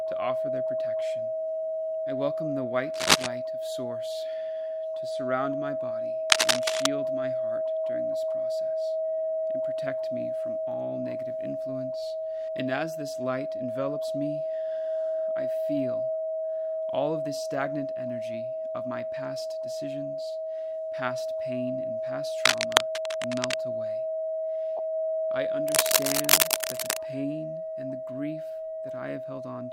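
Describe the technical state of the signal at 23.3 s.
At 23.3 s the signal is in the middle of a burst of cable scratch noise running from about 22.45 to 23.54 s. The likely cause is a worn cable, connector or control being moved, so its contact resistance jumps around rapidly and injects dense, irregular noise into the path. It is heard as a rough scratching, rustling layer sitting a few decibels above the wanted sound for just over a second.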